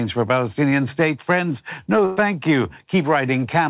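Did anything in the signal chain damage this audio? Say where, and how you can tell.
Yes. Short concealed packet loss at 0.70 to 0.73 s: the network dropped about 20 ms, and the decoder extended the preceding sound, leaving a brief smear.

Burst of packet loss at 2.05 to 2.19 s: about 120 ms went missing in the network, heard as a held, fading continuation before the audio resumes further along.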